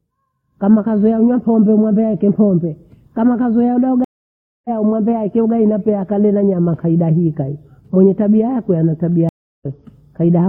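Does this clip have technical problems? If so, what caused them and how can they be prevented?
Yes, there are two stream reconnects. At 4.04 s, after "pombe kama kazoea ula", the sound drops out for about 0.6 s and resumes roughly half a second later in the stream at "umwambie aachae ugali pea". At 9.29 s, after "tabia yake ana tabia", there's about 0.32 s of silence and a similar jump ahead. Each time the connection broke, and the player reconnected and started a fresh decoder mid-stream. A larger client buffer with resume-from-position reconnects would cover these gaps.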